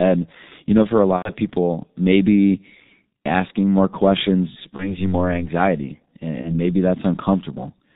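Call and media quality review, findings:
Muffled, hoarse sound throughout, nothing above 4 kHz, consonants smeared. G.723.1 codec at 6.3 kbit/s, heavy damage: 30 ms frames and a slowly updated voice model can't track fast changes, so detail and crispness are lost.

Stretched sound fading out at 1.16–1.30 s, about 90 ms of gap, which fits three lost 30 ms frames. Further shorter dropouts at 4.76–5.09 s and 6.42–6.56 s. VoIP packet loss concealed by the speech codec: the decoder repeats its last pitch and filter with falling gain. Because each frame depends on the previous one, the sound stays weak or distorted past the gap itself.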